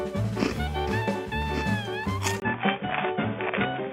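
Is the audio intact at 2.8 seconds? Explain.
No. At 2.8 seconds the sound is dull and boxy, with nothing above about 3.6 kHz. This starts at 2.4 s, after a 20 ms gap, and lasts to the end. The likely cause is an input switched to a poorer device. Its narrower band and faint new background noise replace the original, with no real level change.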